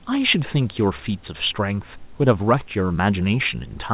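Nothing stood out on listening to this speech; it carries the narrow call-path bandwidth with nothing above 4 kHz and a faint room background about 34 dB below the talking.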